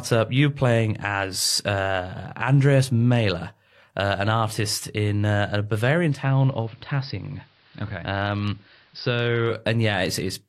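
Right after "in uh a bavarian", at 6.08 s, the digital signal drops and the radio blends to analogue AM: about 3 dB quieter, faint hiss, until 9.61 s.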